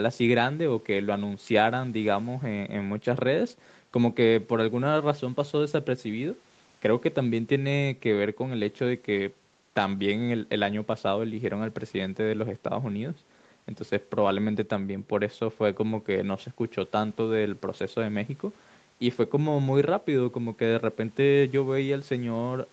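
There are no technical faults to describe in this speech, which shows only the expected effects of call microphone processing.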